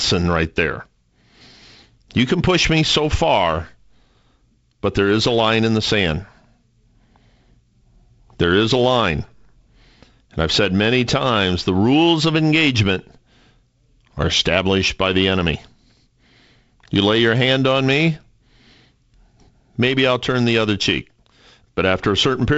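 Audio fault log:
The speech comes through a G.722 wideband telephone path with nothing above about 7.7 kHz and only light coding texture, which fits its 48 kbit/s mode.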